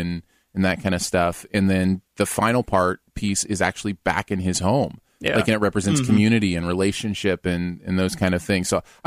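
A speech recording with hard clipping in two places, a short burst from 4.09 to 4.19 s and a longer stretch from 5.26 to 6.33 s. In both, the level is pushed about 4 dB past what the stage can pass, so peaks are sliced flat. The abrupt corners add a harsh, fizzy crackle high in the spectrum, unlike gentle saturation's rounded warmth or a codec's swirly smearing, and it tracks the loudest moments.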